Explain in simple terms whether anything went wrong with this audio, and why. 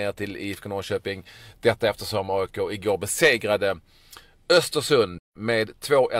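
AAC frame loss with muting: from 5.18 to 5.36 s, lost chunks of compressed audio were silenced, so the speech softly fades into a brief gap.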